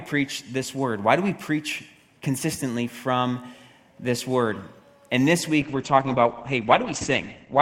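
A call bitrate drop hits at 5.63 s and lasts to the end of the audio. Full-band sound collapses to a muffled, rougher texture with nothing above about 8 kHz, pointing to the encoder falling from around 96 kbps to roughly 12 kbps after the bandwidth estimate sank.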